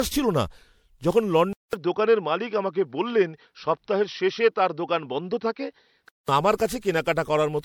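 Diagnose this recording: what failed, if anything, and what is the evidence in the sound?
Codec stage. Throughout the speech there is a swirly, smeared, hollow quality with blurred consonant onsets, far worse than a single pass at 96 kbit/s MP3 would leave, even though content still reaches about 20.5 kHz. That mismatch points to generation loss, likely from around seven successive decode and re-encode passes, each quantising on a shifted frame grid so noise and spectral holes accumulate. A single low-bitrate encode would instead cut the top band early.

Analogue front end. From 1.53 s to 6.29 s the sound turns dull and boxy, with nothing above 5.8 kHz, then opens up again. The change follows a 200 ms silence at the switch, and a faint new noise floor appears well below the speech. The level barely moves, so this is not a gain or AGC fault. The input switched to a poorer device, likely a headset's call profile, whose narrower band and own tone replace the original microphone.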